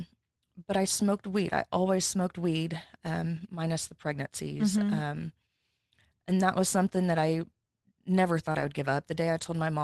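At 8.51 to 8.57 s the sound briefly smears and wobbles, as if the preceding sound were stretched over a small hole. This is short concealed packet loss: about 40 ms never arrived in time, and the receiver filled roughly 32 ms by extending the last sound before blending back.

Overlapping it, from 8.55 to 8.65 s, about 60 ms turns rougher and noisier but stays unbroken. This is a lost packet rebuilt from error correction, which fits three packets restored from low-bitrate copies carried in the following packets, through an Opus call path limited to 12 kHz.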